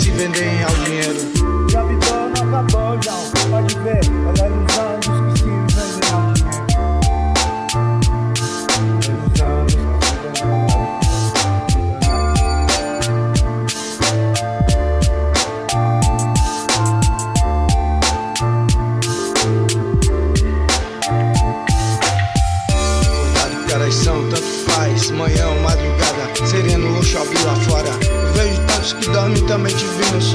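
No technical faults can be heard anywhere in the audio.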